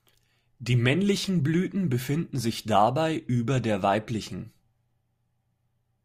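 No technical faults are audible.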